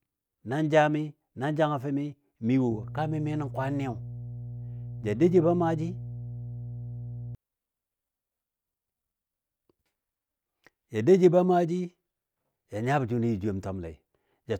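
A steady low drone sits under the speech from 2.72 to 7.35 s, fairly prominent at roughly 10 dB below the signal. This is mains hum at 60 Hz: power-line current leaking into the signal path through a ground loop or nearby transformer.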